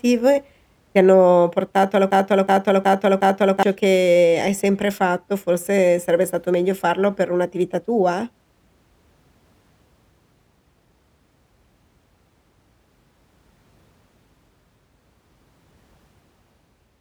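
Right after "ti hanno portato alla", at 2.11 s, the speech hits a broken-record loop: a 0.37 s fragment plays four times back to back until 3.63 s, when "che hai sempre fatto" picks up. Likely a stalled player or stream resending its last chunk, so whatever came between is gone.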